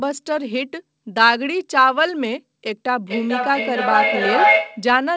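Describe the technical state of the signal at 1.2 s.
At 1.2 s the speech is intact, with no dropout, click or distortion, only the steady band limit of the G.722 call path, which leaves nothing above 8 kHz.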